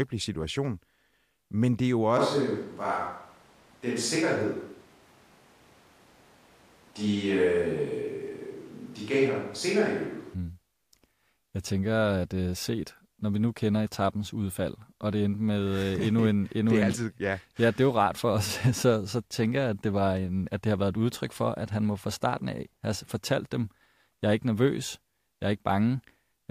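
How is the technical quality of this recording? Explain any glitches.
The recording has one clear glitch. From 2.19 s to 10.33 s, right after "men det jo", the speech turns suddenly roomy and hollow with thinner bass, a switch to a distant microphone, likely because the close microphone's signal dropped out. Loudness barely changes, but room noise rises to around 30 dB below the speech. A spectrogram shows weakened low frequencies, smeared reverberant tails and a raised noise floor between words, with abrupt boundaries at both ends.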